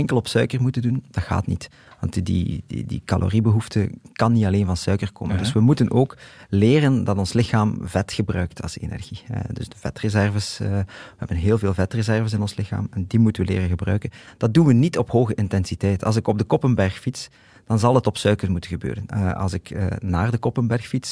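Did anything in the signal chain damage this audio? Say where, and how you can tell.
No, none of the stages between capture and playback left any audible mark of damage on this speech recording.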